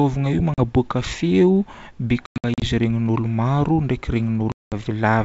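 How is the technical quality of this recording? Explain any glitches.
Quality is marred by three dropouts, heard over G.722 wideband coding that sounds full-rate with only a light hiss in the upper band. Packet loss on an ADPCM call hits at 0.54 to 0.58 s (40 ms), 2.26 to 2.65 s (220 ms scattered, longest run 100 ms) and 4.52 to 4.74 s (200 ms). Lost packets leave hard-edged silent gaps, flat blank columns on a spectrogram. The decoder's predictor and step size are then out of step with the sender's, so speech returns slightly distorted and settles quickly.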